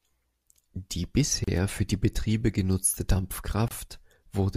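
The speech drops out briefly for about 34 ms at 1.44 s, just before "für die", and again for about 27 ms at 3.68 s. Each is a gap at a join of encoded pieces, where separately encoded segments were spliced untrimmed, leaving encoder delay and end padding as silence.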